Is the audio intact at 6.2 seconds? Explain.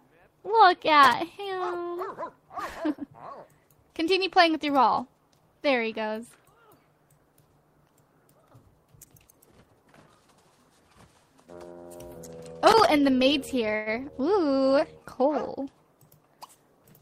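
Yes, at 6.2 seconds the audio is intact, with no dropout, glitch or other technical fault to be heard there.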